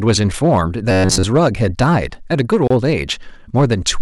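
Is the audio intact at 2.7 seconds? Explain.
No. From 2.68 to 2.70 s a gap of about 29 ms, a gap at a join of encoded pieces, opens in the speech. Two separately encoded segments were butted together with the encoder's start-up delay and last-frame padding left in. Unlike a dropout, nothing is lost: the sound resumes exactly where it stopped, and the codec softens the abrupt edges.

Hard clipping is also present at this moment. The signal is driven about 8 dB past what the chain can pass, so a small share of peaks are cut flat. That adds high harmonics heard as distortion on the peaks. Unlike a gap, it leaves no silence.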